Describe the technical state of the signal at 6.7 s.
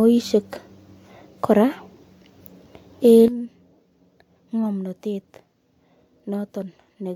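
At 6.7 s the signal sits inside a sudden gain jump that began at 3.28 s and runs to the end: speech and background noise both drop by about 12 dB at once, likely from a gain setting applied without a ramp. The waveform envelope steps down sharply, and the spectrogram darkens evenly across all frequencies.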